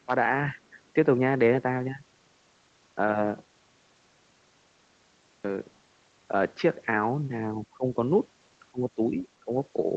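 Right at the start, 0.06 to 0.11 s, then 7.65 to 7.96 s, 8.72 to 9.26 s and 9.45 to 9.51 s, the speech dips by roughly 10 to 20 dB, deepest in the third stretch. That's likely speech suppressed in double talk, with the echo canceller ducking the talker.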